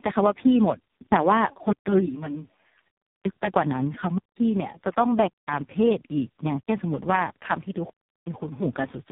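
Throughout, the call went through tandem speech coding: three speech codecs in a row, each decoding and re-encoding the previous one's output, ending in what sounds like low-rate AMR-NB. The damage compounds, leaving speech rough, muffled and warbly, with nothing above 3.7 kHz.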